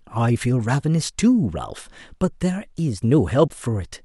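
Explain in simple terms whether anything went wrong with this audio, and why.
Near the end, from 3.46 to 3.52 s, the speech breaks into a brief glitch: damaged data in a compressed stream, where corrupted bytes made the decoder lose its place and resync.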